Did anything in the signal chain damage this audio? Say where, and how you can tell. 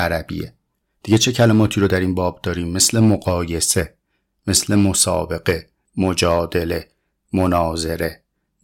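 No, nothing in the chain damaged it.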